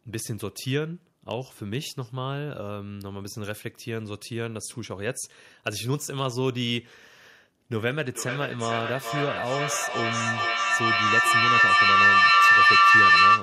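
Feedback howl from 7.77 s onward: a microphone-loudspeaker loop gains level each pass, swelling to a tone near 1 kHz with repeats roughly every 0.4 s, peaking about 12 dB above speech.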